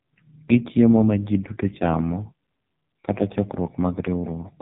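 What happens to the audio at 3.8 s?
The speech at 3.8 s is running through the AMR narrowband mobile codec, as it does across the whole clip. The encoder rebuilds the voice from a vocal-tract model and a few pulses, starved of bits in a way that points to its lowest 4.75 kbps mode. Nothing above 3.8 kHz survives, so the voice sounds muffled, buzzy and heavily synthetic.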